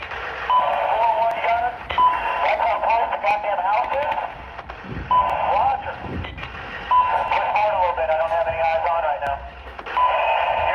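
At 1.31, 3.31, 5.30, 7.28 and 9.27 s, overlap between stream segments at each 2 s boundary discards 5 to 16 ms, so the waveform jumps in a tiny skip.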